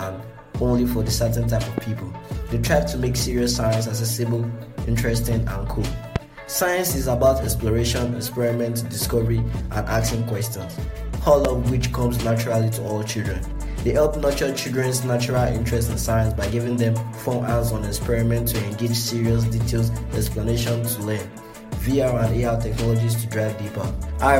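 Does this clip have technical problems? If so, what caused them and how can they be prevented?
Yes. A sudden voltage step, likely from a plug, switch, static discharge or driver glitch, entered the signal chain three times, causing a loud pop at 1.78 to 1.80 s, 6.16 to 6.18 s and 11.45 to 11.47 s. The downstream circuits shaped each pulse into a single sharp pop lasting a couple of hundredths of a second and peaking roughly 15 dB above the surrounding audio, which continues uninterrupted beneath each one. Secure connections, avoid switching equipment or touching cables while recording, and keep audio drivers up to date.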